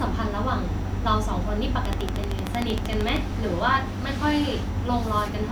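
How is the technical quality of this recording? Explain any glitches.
The recording has one clear glitch, a train of clicks. It runs from 1.85 s to 3.17 s. About twenty sharp pulses arrive at a regular 13 per second, each much like the last. They peak roughly 15 dB above the speech. The likely cause is a repeating electrical disturbance, such as interference from nearby equipment or a faulty connection or power supply. It is heard as a steady ticking laid over the speech, continuing through any gaps.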